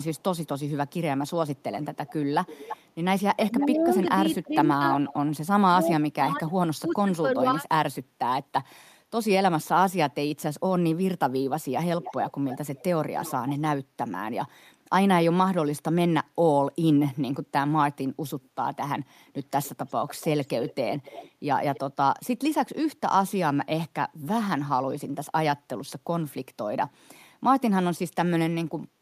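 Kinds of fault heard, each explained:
Echo leak: The far end is likely playing the call over a loudspeaker, and its echo canceller is not removing everything its microphone picks up, so part of the speech is sent back. A delayed, quieter copy trails the speech in three stretches, 0.17 to 5.87 s, 12.02 to 13.59 s and 18.42 to 21.8 s. It lags by 331, 301 and 284 ms and sits about 10, 15 and 20 dB below the speech, growing fainter each time.
Speech suppressed in double talk: When both sides talk at once, the echo canceller likely cannot separate the local talker from the loudspeaker echo and turns both down together. Between 3.49 and 7.65 s, overlapping the first echo stretch, the speech dips and cuts out in pieces for about 1.5 s in total. The deepest drops fall about 40 dB, enough to make parts of the speech disappear almost entirely.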